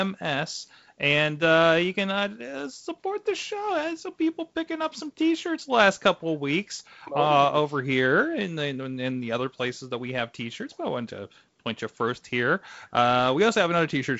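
No technical faults can be heard in this speech; it comes through G.722 wideband telephone coding as that path normally sounds.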